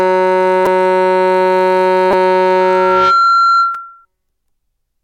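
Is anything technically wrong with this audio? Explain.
Yes, the music has two kinds of fault. At 0.66 s, from 2.11 to 2.13 s, and at 3.75 s there are short clicks or brief buzzy stutters. This is a repeated buffer: fresh audio arrived late, so the player replayed its last block, twice, four times and once, losing a few milliseconds each time. The short repeat period fits a buffer of about 5 ms.

From 2.60 to 4.05 s a steady 1.4 kHz tone swells over roughly half a second until it is about as loud as the music, then stops. This is loudspeaker feedback squeal, where a microphone picked up its own loudspeaker and the loop gain at that frequency went above one.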